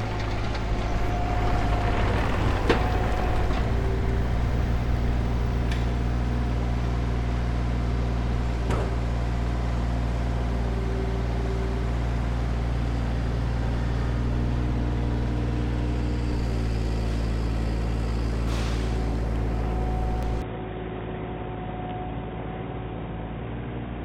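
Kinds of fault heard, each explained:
Compressed frames skipped: At 1.09 s and again at 20.23 s the audio jumps forward by about a tenth of a second, roughly one 92.9 ms frame that never reached playback. On the waveform the envelope changes abruptly at the join. On the spectrogram a thin vertical seam appears where the pattern lurches ahead without any gap.
Input switched to a poorer device: From 20.42 s to the end the sound turns duller and boxier. Nothing remains above 3.8 kHz, the level drops by about 5 dB, and a new noise floor sits around 30 dB below the signal, with no silence at the change. The likely cause is the input moving mid-recording to a narrower-band microphone or a headset's call profile. On a spectrogram the upper band is cut off flat from that point, and the waveform shrinks slightly.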